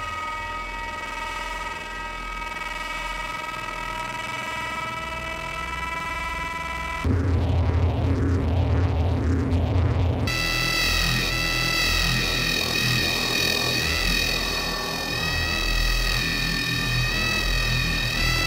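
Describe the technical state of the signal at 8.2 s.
At 8.2 s the signal is intact, with no audible fault at that point.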